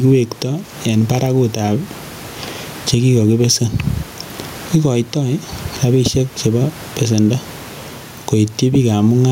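Gain pumping runs through the whole speech clip, with the gain swinging by roughly 15 dB. Loud and quiet syllables sit unnaturally close in level, giving a squashed quality. The likely cause is input gain set far too high, with a fast limiter or compressor clamping down on each loud peak. The room noise sits normally about 32 dB below the speech.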